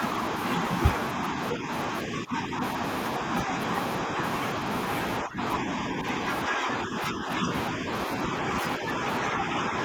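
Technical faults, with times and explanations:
1.14–1.71 s, 2.04–2.61 s, 3.19–3.52 s, 4.05–4.20 s and 5.21–9.75 s: speech suppressed in double talk. The speech level dips by about 5 dB, and by about 10 dB in the second stretch. This is likely an echo canceller turning the talker down while both sides speak.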